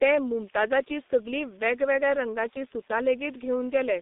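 Throughout, the speech carries heavy G.723.1 codec damage. Nothing survives above 3.8 kHz, and the band sits near 200 Hz to 3.7 kHz. The coarse 30 ms frame model, which fits a 6.3 kbit/s stream, leaves the voice muffled and hoarse, with smeared consonants.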